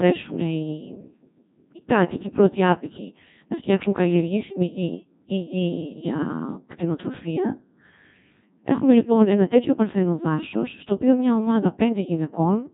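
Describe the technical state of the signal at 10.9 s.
At 10.9 s the speech is still passing through the Codec 2 vocoder, as it does for the whole clip. The decoder does not keep the original waveform. It rebuilds the voice from sine waves using only pitch, voicing, energy and a coarse spectral envelope. The result sounds robotic and buzzy, with heavy damage. Nothing is heard above 3.8 kHz. The thin, synthetic quality points to a low-rate mode, around 1.6 kbit/s.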